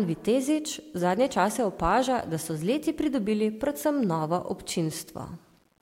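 From start to finish, the speech carries a grainy, rasping distortion that rises and falls with the voice, most obvious on soft syllables and word endings, where the sound turns gritty and the quietest tails sputter or drop abruptly to silence. The error sits roughly 40 dB below the signal. This is likely low bit depth without dither: the audio was rounded to only about 9 bits, so the quantisation error tracks the signal instead of forming a steady, neutral hiss.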